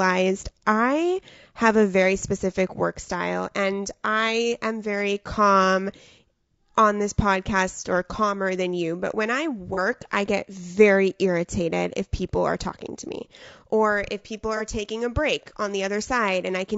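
From the start of the clip to the end, the speech sounds rough and grainy, with a hiss that fills the gaps between harmonics and a top band that sounds thin and synthetic. The likely cause is low-delay AAC compression of the AAC-ELD type used for video calls. Its short frames separate pitch harmonics poorly and use bits less efficiently, and the damage is plainly audible at a rate that fits about 32 kbps.

At 9.74 to 9.79 s and again at 14.57 to 14.62 s, there is a brief smeared, noisy patch. These are AAC frame losses with concealment. Each time, the decoder lost about 30 ms of audio and filled the gap by reusing the last good spectrum with altered phase or interpolated energy. The gaps are short, so the sound never decays to silence. Each patch lasts about as long as a single frame.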